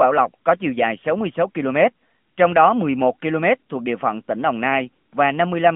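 Thin, boxed-in and buzzy from start to finish, the speech has a synthetic edge and no air or sibilant brightness, sitting in a narrow band from roughly 150 Hz to 3.5 kHz with nothing above 3.7 kHz. That points to the AMR narrowband mobile codec. It samples at 8 kHz and rebuilds each 20 ms frame from a vocal-tract model excited by sparse pulses. The plainly audible coding damage fits a mid-rate mode around 10 kbps.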